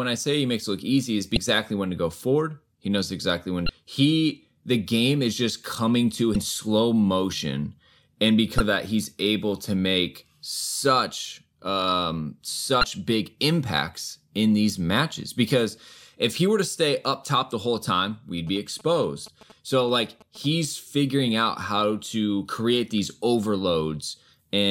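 Damaged data in a compressed stream appears at 1.34–1.37 s, 3.66–3.69 s after "knows exactly when", 6.32–6.36 s between "is just coming to" and "slow motion and", 8.57–8.60 s, and 12.80–12.84 s between "to make such um" and "big impacts in these". Each is a short glitch of about 33 ms, where the decoder hit corrupted frames, lost sync and resumed at the next header.

GSM signalling bursts run from 18.47 to 20.46 s. A nearby 2G phone's radio bursts were rectified by the audio circuit, giving a galloping dit-dit-dit of short 217 Hz buzzes, roughly 25 dB below the speech.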